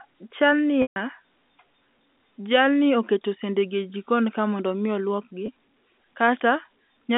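Two dropouts with pitch repetition turn up in the speech. From 0.82 to 0.96 s, roughly 140 ms goes missing, which fits about seven 20 ms packets. The receiver loops the last pitch period, so you get a brief buzzy hold that fades toward silence before the speech cross-fades back in. A much shorter one at 5.46 to 5.48 s, about a single packet's worth, just sounds like a slightly held note. All of it sits inside the narrow G.711 telephone band.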